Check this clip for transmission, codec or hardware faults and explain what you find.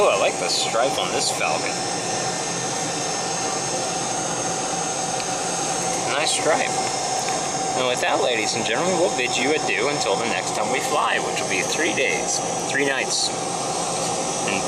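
Nothing stood out on listening to this clip.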